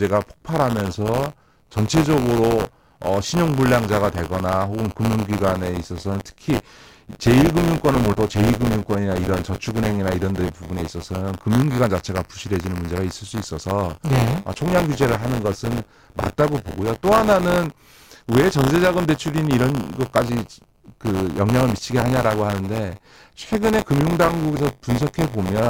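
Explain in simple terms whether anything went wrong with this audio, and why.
Something did go wrong here: the speech carries buffer tearing from start to finish. The program filling the audio buffer and the hardware playing it have drifted out of step, so in every 10 ms chunk a small slice, a few percent, is audio from about 20 ms earlier, spliced in with hard edges. That repeating glitch is the steady robotic buzz you hear at 100 Hz, and it's only there while someone is talking.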